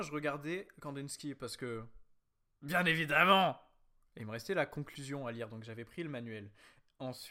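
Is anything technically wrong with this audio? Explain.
No, nothing technically wrong can be heard here.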